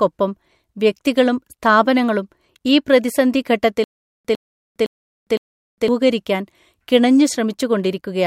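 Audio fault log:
3.84–5.88 s, stutter with silent gaps: after "വ്യക്തികളും സ്ഥാപനങ്ങളും ഈ പ്രതിസന്ധി", a 104 ms burst repeats four times every 511 ms, separated by 407 ms digital silence, likely a stalled stream replaying its last fragment; the intervening audio is lost.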